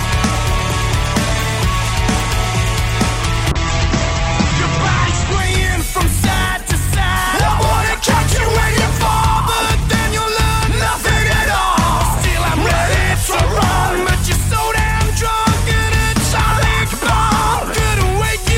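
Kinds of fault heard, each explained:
Call bitrate drop: a falling bandwidth estimate forced the encoder from 128 kbps to 10 kbps between 3.52 and 8.71 s, holding the lowest rate for 1.88 s. The sound turns coarse and watery, and its top end narrows from 20 kHz to 8 kHz.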